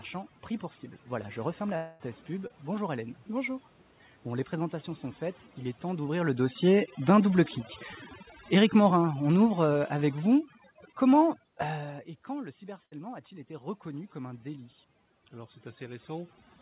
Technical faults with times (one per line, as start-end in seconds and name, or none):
0.00-16.61 overdone noise removal
1.76-2.02 long network dropout
2.48-2.52 short concealed packet loss
5.98-7.38 automatic gain falling
8.45-11.43 automatic gain falling
12.86-12.93 burst of packet loss